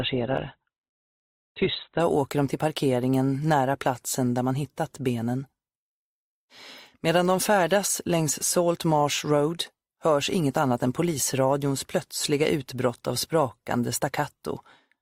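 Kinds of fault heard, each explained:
Adaptive stream starting at a low bitrate: the player opened on a cheap, quick-loading rendition and switched up once it had gauged the connection. From 0.0 to 2.0 s nothing sounds above 4.2 kHz, leaving the audio dull, with smeared codec artefacts that suggest a very low Opus rate near 12 kbit/s. At 2.0 s fidelity jumps, consistent with about 64 kbit/s. On a spectrogram a flat ceiling at 4.2 kHz suddenly lifts; the waveform shows no gap.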